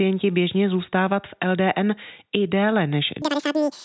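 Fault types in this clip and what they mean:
wrong sample rate: Samples are played at double their recorded rate with no conversion, which fits 8 kHz material running at 16 kHz. From 3.22 s to the end at 3.85 s, the speech runs twice as fast and a full octave higher, 12 semitones up.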